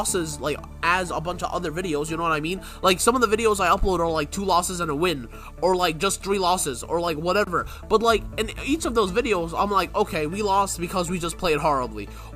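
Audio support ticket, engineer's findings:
No audible faults found; nothing to escalate.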